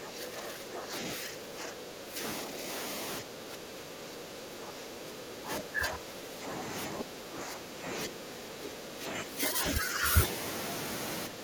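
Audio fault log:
0.00–0.94 s, 1.16–2.22 s, 2.44–2.66 s, 3.21–6.63 s, 6.90–7.88 s, 8.07–10.15 s and 11.28 s to the end, speech suppressed in double talk: the speech repeatedly sinks by roughly 10 dB, with a shallower dip of around 5 dB at 2.44–2.66 s. The longest stretch runs for about three seconds. This is likely an echo canceller that heard both ends talking at once, could not tell this talker from returning loudspeaker echo, and turned everything down.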